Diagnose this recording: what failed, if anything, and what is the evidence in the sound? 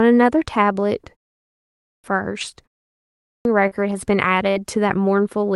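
Clipped start after a pause, at 1.55 s and 3.0 s: the playback device sleeps during the 0.47 s and 0.41 s pauses and swallows about 0.49 s and 0.45 s of speech while waking.

Short concealed packet loss, 3.67 to 3.74 s: about 40 ms of the Opus call stream arrived too late. The receiver extrapolated the preceding sound to bridge the hole, leaving a brief smear.

Burst of packet loss, 4.51 to 4.59 s: consecutive packets, about 40 ms of audio, were lost in the network. Concealment held and faded the last sound before speech resumed further on.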